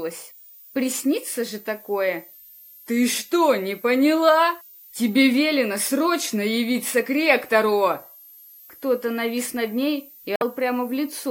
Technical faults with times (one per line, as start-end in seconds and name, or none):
0.00-11.31 switching supply whistle
10.33-10.42 damaged data in a compressed stream